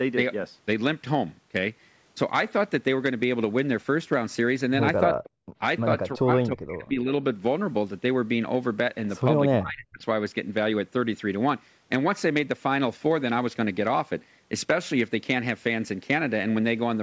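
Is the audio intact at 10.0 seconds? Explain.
No. From 9.57 to 10.02 s the speech is pushed down hard, by about 40 dB at its deepest, so it nearly vanishes and then comes back. The likely cause is speech suppressed in double talk: with both ends talking at once, the echo canceller treated the near talker as loudspeaker echo and attenuated it.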